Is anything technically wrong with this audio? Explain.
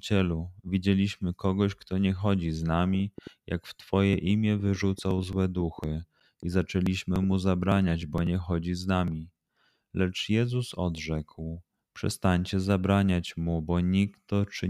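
Yes. A train of clicks runs from 2.94 to 7.77 s, between "kto nie chodzi z" and "bo nie chodzi z": about twenty similar pulses at roughly 4.6 per second, unevenly spaced and about as loud as the speech, likely from electrical interference or a faulty connection or power supply, heard as popping ticks that continue through pauses.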